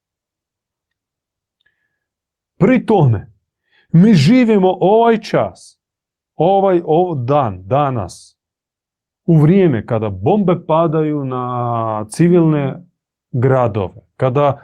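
No technical faults can be heard anywhere in this recording.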